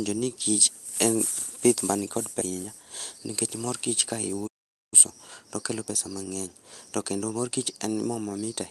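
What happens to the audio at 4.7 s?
At 4.7 s the speech is in the middle of a playback stall. The output goes silent from 4.47 s to 4.94 s, a gap of about 0.45 s, and then the speech resumes. The likely cause is a player that ran short of data or was briefly blocked.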